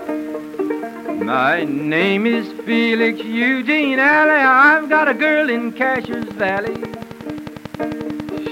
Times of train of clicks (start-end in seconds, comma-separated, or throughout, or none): 5.96-8.47